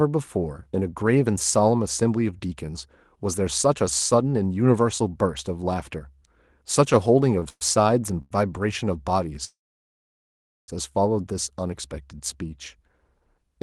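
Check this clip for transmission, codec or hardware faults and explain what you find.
The speech has two kinds of transmission fault, both timing problems in a call, heard over an Opus path whose high end stops at about 12 kHz.

Short stalls from a late packet occur at 7.39 to 7.44 s and 8.22 to 8.33 s. The sound hangs for 23 ms, then 89 ms, with a faint buzz or dip. A packet arrived late, the jitter buffer emptied, and the receiver stretched the last sound before resuming. Nothing is lost, but the timing lags.

Call audio freezes occur at 7.49 to 7.63 s and 9.45 to 10.7 s. The first holds for 119 ms, fading to 30 ms of silence. The second stretches into a 1.24 s gap, 1.13 s of it silent. The likely cause is packets held up in transit, draining the jitter buffer. When they arrive, the speech resumes where it stopped, with little or nothing missing.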